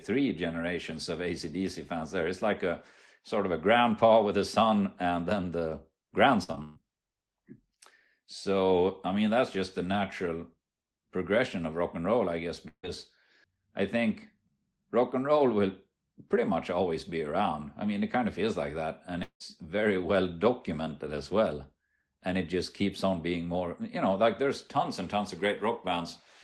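Repeated packet loss (robotic sound) runs from 6.43 to 6.78 s. Four separate holes open in the speech within that third of a second, the longest about 136 ms, and each is bridged by stretching out the sound just before it. Around 60 percent of the span is this patched-in material, so the voice turns choppy and mechanical, with about 220 ms of real speech gone.

A burst of packet loss follows at 12.68 to 12.85 s, right after "and roll I guess". A short run of audio failed to arrive in time. The receiver held the last sound for roughly 150 ms while fading it, and that becomes a brief buzz or hiss that dies away. About 70 ms of near-silence trails it before speech resumes, with around 160 ms of the original missing.

At 19.23 to 19.42 s, between "feels like that and" and "very well documented as", the speech breaks into a fading held tone of about 170 ms and then roughly 90 ms of silence. About 180 ms of speech never comes back. 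This is likely a long network dropout, where nothing arrived for a stretch and concealment ran out. The Opus call path limits the band to around 12 kHz throughout.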